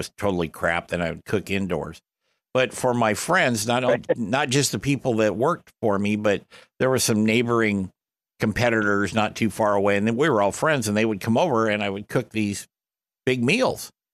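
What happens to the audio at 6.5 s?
Nothing goes wrong at 6.5 s; the speech there plays through intact, with no dropout, click, glitch or other audible fault.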